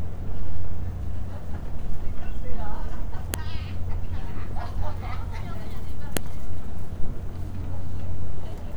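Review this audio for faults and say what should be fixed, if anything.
There's a sharp snap at 3.34 s and another at 6.17 s: a file header played as audio. Pieces were joined with their WAV headers still attached, so those bytes came out as a loud click. Strip the header from each piece before concatenating or streaming, and only pass on the raw sample data.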